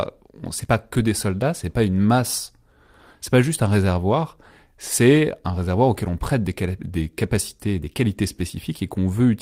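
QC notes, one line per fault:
6.95–7.05 s, lost packet rebuilt from error correction: 60 ms, likely three packets, replayed from low-bitrate backup copies, so no gap, but rougher and noisier.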